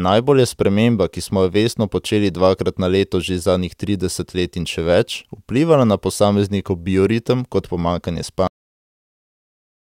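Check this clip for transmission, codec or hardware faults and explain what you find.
One fault is present: a cut-off end. At 8.47 s, right after "posameznikov bioritem kot pomanjkanje", the speech stops mid-sound and drops straight to digital silence through 9.92 s. The final buffers were never written out, so there is no natural decay.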